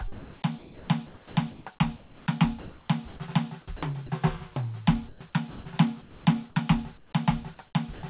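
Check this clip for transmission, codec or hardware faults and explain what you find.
Yes, there are faults. The music passes through a narrowband call path, with nothing above 4 kHz, which fits G.711 mu-law at 64 kbps. Three kinds of voice-detector fault appear.

Sound chopped by the voice detector, 0.12 to 4.10 s and 5.09 to 6.26 s. The detector likely kept switching transmission off and on during the music. In the first stretch, about 1.9 s in total is replaced by comfort noise. In the second, about 0.5 s is replaced. The music stutters.

Comfort noise in place of the background, 6.98 to 7.13 s. For 150 ms the sender likely stopped transmitting, and the receiver generated its own noise. That noise only roughly matches the real background, which sits about 36 dB below the loud parts. The fill is steady and featureless, and about 12 dB quieter.

Sound dropped by the voice detector, 7.94 to 8.03 s. 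Near the end, the detector likely mistook quiet music for background and stopped sending. That lost about 60 ms of real sound, and the 90 ms gap is filled with comfort noise. The music cuts to a soft, even hiss. It returns only when the detector triggers again.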